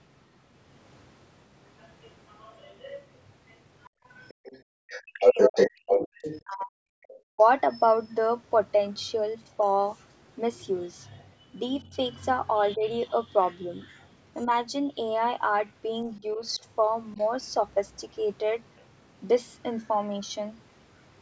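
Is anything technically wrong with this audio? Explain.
Yes, the speech shows echo-canceller problems on a speakerphone-style call.

Other side's voice leaking through: from 1.8 to 7.42 s a second voice is heard at roughly the same level as the talker, likely loudspeaker echo the canceller failed to remove. Fainter residues, about 30 to 35 dB down, appear from 9.61 to 14.07 s, 15.68 to 17.27 s and 18.77 to 18.85 s.

Background gated by the echo canceller: between 3.89 and 4.75 s the room sound drops by up to about 40 dB for a few tenths of a second. The canceller clamped the microphone while the loudspeaker played.

Speech suppressed in double talk: from 5.03 to 7.43 s the talker's voice dips by up to about 40 dB for well over a second. This is likely the canceller attenuating everything while both sides spoke at once. Shorter, shallower dips of about 10 dB occur from 11.87 to 12.84 s, and of about 5 dB from 16.2 to 17.18 s.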